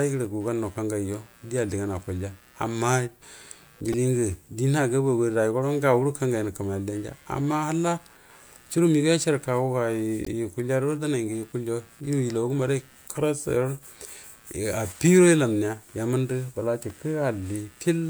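Speech runs over a faint computer activity noise throughout, a buzz pulsing at roughly 100 Hz and about 35 dB below the speech, visible on a spectrogram as vertical striations. A repeated buffer at 3.93 s plays one 2.7 ms slice three extra times, and another at 16.90 s repeats it once. Both repeat lengths fit a 128-sample buffer, and each shows as tiny identical waveform cycles with hard joins. From 10.24 to 10.28 s, damaged data in a compressed stream produces a brief disturbance as the decoder loses sync.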